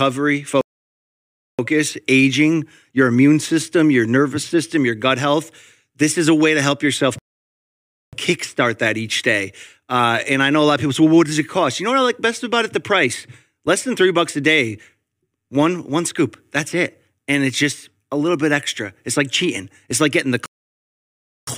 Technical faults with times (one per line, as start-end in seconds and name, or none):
0.61-1.59 playback stall
7.18-8.13 playback stall
20.46-21.47 playback stall